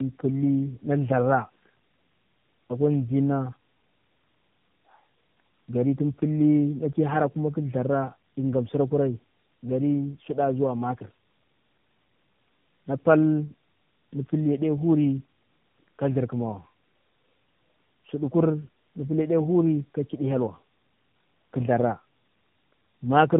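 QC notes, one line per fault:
Throughout: tandem speech coding. The speech sounds rough, muffled and warbly, with nothing above about 3.8 kHz and a noisy texture. The signal passed through two AMR-NB speech coders in sequence, with a G.711 link between them, so it was decoded and re-encoded at each border. The second coder, at 12.2 kbit/s, had to model audio already degraded by the first at 7.95 kbit/s, compounding the losses.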